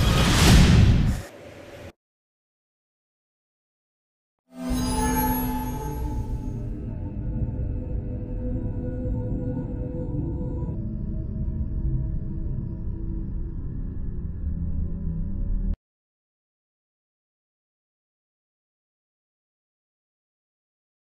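A clock mismatch in playback or editing is the likely cause: a section at the wrong speed runs from 0.0 to 10.75 s, with the audio played back 1.53 times faster than it was recorded. Because speed and pitch are tied together here, everything in that stretch sounds hurried and shifted up by about seven semitones, roughly a musical fifth. The change ends abruptly at 10.75 s, where the sound drops back to its natural pace and pitch.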